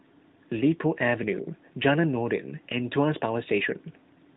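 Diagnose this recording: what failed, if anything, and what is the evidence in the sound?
Nothing failed; the recording shows no faults.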